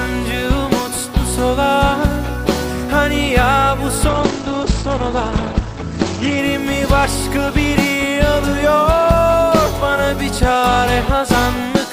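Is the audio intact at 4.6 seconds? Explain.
No. From 4.09 to 6.44 s the sound turns muffled and rough, with the top end gone. This is a call bitrate drop: the encoder fell from 64 to 14 kbps for about 2.3 s and narrowed its bandwidth from 20 kHz to 8 kHz.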